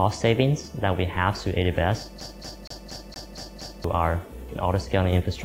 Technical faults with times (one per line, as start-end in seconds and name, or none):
2.21-3.84 CD stuck on one turn